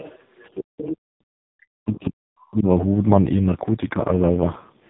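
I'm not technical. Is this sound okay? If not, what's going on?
No. The whole clip went through the AMR narrowband mobile codec, an old phone-call format. Everything above 3.8 kHz is gone, so the speech sounds muffled, buzzy and robotic.

From 0.97 to 1.31 s the background room sound almost vanishes. That is background gated by the echo canceller, which briefly muted the microphone.

From 1.87 to 2.1 s a faint second voice sits under the speech. It is likely the other side's voice leaking through from the loudspeaker.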